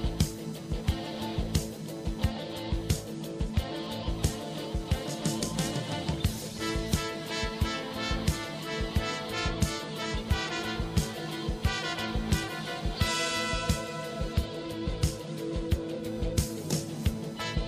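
Running under the whole clip there's computer activity noise, pulsing at around 1 kHz and sitting roughly 25 dB below the signal. It comes from processor, graphics or mouse load shifting the shared ground, so it follows what the computer is doing rather than the audio itself.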